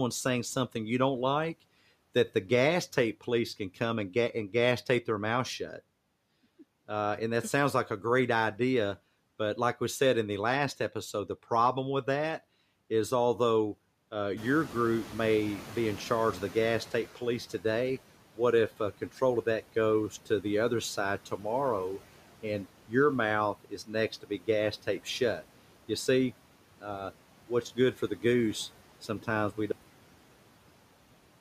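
Throughout the clip, a noise suppressor cutting steady noise by about 12 dB frame by frame leaves noise suppressor artifacts: the noise sinks between the words and rises under them.

From 14.37 to 17.18 s, after the room noise jumps by about 17 dB around 14.5 s, the suppressor's estimate lags, so the noise suppressor catches up over 2.8 s, sinking by about 9 dB.

At 23.64 to 23.94 s the suppressor mistakes part of the speech for noise, dropping it by up to about 11 dB, so roughly a tenth of a second sounds swallowed.

At 29.72 s the final buffers were never written, giving a cut-off end: the audio stops mid-sound and falls straight into digital silence with no decay.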